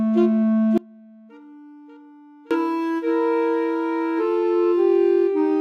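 At 0.78 s the sound cuts out abruptly, and until 2.51 s only a faint trace of it remains, roughly 30 dB below its normal level, before it returns just as suddenly. This 1.73 s audio dropout to a faint residue has hard edges rather than a fade. The cause is likely a momentary loss of the wanted signal upstream while the rest of the chain stayed live, letting only a weak leak through.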